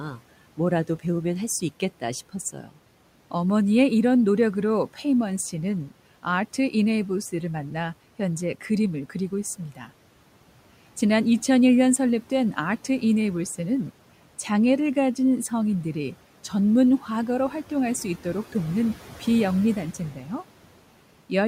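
At 2.53 to 2.7 s the noise suppressor misjudged part of the speech as background and pulled it down by about 9 dB along with the room noise, which sits about 23 dB below the voice. For around a tenth of a second, the speech sounds swallowed and faint.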